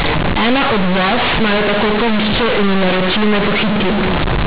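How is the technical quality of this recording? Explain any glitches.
Quality's poor: there's one serious fault running the whole way through, on top of a telephone-band G.711 A-law signal that tops out at 4 kHz.

Companded audio read as linear, from start to finish: the A-law bytes are being played straight as linear 8-bit samples with no expansion. Every sign change slams the waveform across half its range, so quiet bits come out as loud as loud ones. You get a harsh, very loud buzzy distortion over the speech and heavy noise filling the pauses.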